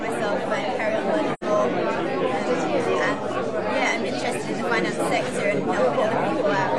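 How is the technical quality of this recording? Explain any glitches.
One glitch is audible. From 1.33 to 1.44 s there is AAC frame loss with muting. The decoder zeroed the missing spectrum. Overlapping windows fade the sound out and back in, leaving a soft-edged hole. About 85 ms is lost, which fits two dropped frames.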